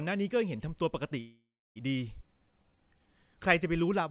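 From 1.2 to 1.78 s the speech stops in a call audio freeze, likely caused by packets held up in transit until the jitter buffer ran dry. The last sound is stretched into a fading buzz that sinks into about 320 ms of silence, and the speech then resumes exactly where it left off, so roughly 0.56 s of dead time has been inserted and nothing is lost.

A skip ahead follows between 2.22 and 2.24 s. Around 150 ms of speech is dropped while later audio was already queued, and the two sides are butted together with only a tiny joint, so the speech lurches forward abruptly.

From 2.26 to 3.12 s comes a jitter buffer slow-down. The buffer rebuilds its reserve by repeating individual pitch periods, adding 154 ms and running the speech at 83% speed. Pitch holds steady while sounds drag out. Throughout, the audio is band-limited to nothing above 4 kHz, consistent with a G.711 telephone codec.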